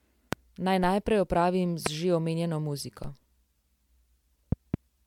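Speech with a swirly, hollow, smeared character throughout and softened consonant attacks, more damage than a single 128 kbit/s MP3 encode would leave. This is likely generation loss from several repeated MP3 decode and re-encode passes, each adding fresh quantisation noise and spectral holes on a shifted frame grid. Loud pops sit on top of the continuing speech at 0.33 to 0.35 s and 1.86 to 1.89 s, each a single sharp hit about 20 dB above the signal, and again at 4.52 to 4.76 s as a double pop about 15 dB up. These are likely short voltage pulses, such as a switch transient or static discharge, added to the signal and shaped by the downstream circuitry. At 3.04 s a DC step gives a low thump as the waveform's zero line jumps, then settles back as a roughly 5 Hz high-pass drains the offset, while the speech carries on unchanged.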